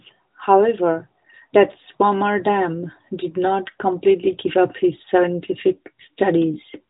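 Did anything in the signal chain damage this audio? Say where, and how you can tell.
No, nothing in the chain damaged this speech; it passes through an AMR narrowband mobile codec working as designed, with the band ending near 3.8 kHz and only the light coloration expected at a rate that fits the 12.2 kbps mode.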